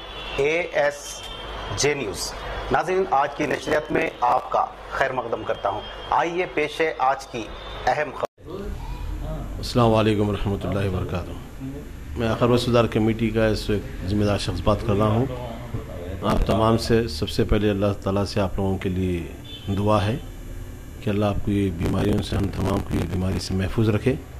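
The audio has three bursts of processor overload crackle: 3.37 to 4.48 s, 16.20 to 16.52 s, and 21.79 to 23.52 s. The processor could not finish each small audio buffer on time. Each missed deadline repeats a scrap of old audio with hard edges. The gritty tearing comes from roughly 50, 7 and 70 of these in a row. The short grain points to buffers of around 10 ms. The crackle stops once the load eases.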